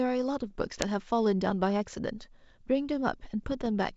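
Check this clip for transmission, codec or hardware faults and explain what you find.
There is one fault: bit errors on an ADPCM link, heard twice, from 0.50 to 0.84 s and from 3.44 to 3.68 s. The sound sits on a wideband link that fits G.722. Bits are being corrupted at an error rate well under one percent. Each flipped bit throws off the decoder's predictor and step size. The error then rings on for a few milliseconds. The result is pops and rough, gritty bursts with brief jumps in level.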